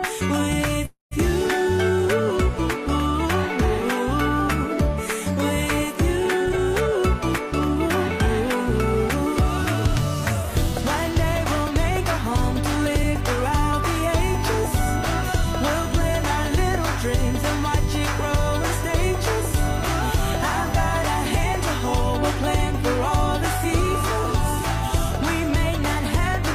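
A call audio freeze runs from 0.85 to 1.13 s. The sound stops moving forward and the last moment is stretched into a fading fill that ends in about 140 ms of silence. When the flow resumes, it picks up exactly where it left off, so nothing is lost, but a 258 ms gap has been inserted. The likely cause is packets stalling in transit until the receiver's jitter buffer ran dry and the receiver had to improvise until they arrived, which left the audio 258 ms later from then on. A jitter buffer speed-up follows from 6.45 to 7.76 s. The audio plays at 114% of normal speed while the pitch stays the same, so that stretch sounds hurried. Too much audio had built up in the buffer, and the receiver worked the delay back down by repeatedly cutting out short slices about one or a few pitch periods long. Together these cuts removed roughly a fifth of a second. USB whine appears from 14.14 to 21.98 s as a steady 1 kHz tone sitting about 20 dB below the signal. 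The fixed pitch matches the 1 ms frame rhythm of the USB bus. Current pulses from that traffic have leaked into the audio path through the shared power or ground.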